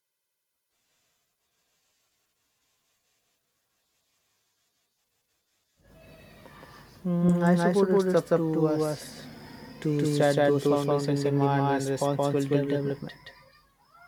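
From start to end the speech carries a doubled audio track: a second full-band copy trails about 150 ms behind at roughly equal level, dry and uncoloured, giving a slapback echo. A slower second capture path is the likely cause.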